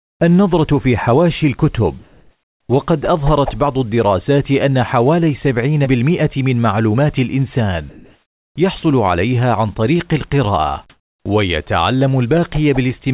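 Comfort noise in place of the background appears in this speech recording at 0.0–0.2 s, 2.03–2.69 s, 7.90–8.56 s and 10.90–11.26 s. In those pauses the real room tone gives way to a steady, featureless hiss. It is about 25 dB quieter in the opening stretch and only about 2 dB quieter in the later three. The likely cause is discontinuous transmission: the sender's voice detector stopped sending during silence, and the receiver synthesised noise shaped roughly like the background. Onset clipped by the voice detector follows two of those gaps, at 2.67–2.69 s and 8.54–8.56 s. There the first 20 ms of the returning speech is missing, so it starts abruptly, without its soft rise. This is likely because the detector was slow to notice that sound had resumed and the receiver kept playing comfort noise over the start. Sound dropped by the voice detector occurs at 8.80–8.83 s. A 30 ms piece of speech briefly gives way to the same steady noise and then comes back. 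The likely cause is that the detector mistook the sound for background and cut transmission until it triggered again. The call path itself runs through a narrowband telephone codec, and nothing above 4 kHz is present, which fits 64 kbps G.711 A-law.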